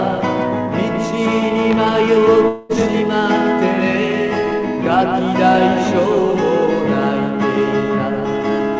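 Audio heard through a call path, with nothing above 8 kHz, which fits G.722 at 64 kbps. At 2.48 to 2.72 s the sound breaks into a fading buzz. About 210 ms is lost. A long network dropout is the likely cause.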